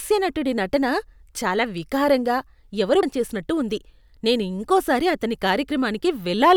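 Speech with compressed frames skipped at 3.03 s, between "నటన చాలా వికారంగా ఎవరో" and "చేసినట్టు ఉంది నేను": about half a second, roughly seven frames of about 85 ms each, never plays.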